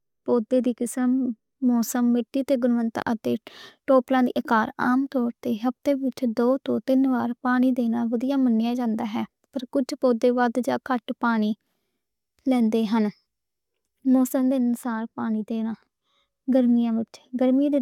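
No technical faults can be heard at any point in this speech recording.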